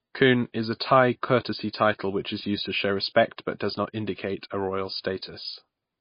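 Speech runs through the whole clip with a hard ceiling near 5.1 kHz. Nothing sounds above it, so s sounds lose their hiss and the voice turns dull. Weaker detail flickers in and out from moment to moment. That gives a watery, swirly texture, and consonant attacks smear. The damage is plainly audible. The likely cause is MP3 compression at a very low bitrate, around 24 kbps judging by the cut-off and the artefacts.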